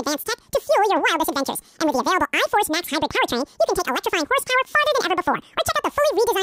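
From start to finish the speech plays at 2.0x speed and a full octave higher, because the audio was read two samples at a time (double speed): the reader took each pair of samples as a single frame. A plain sample-rate mismatch would also raise speed and pitch together.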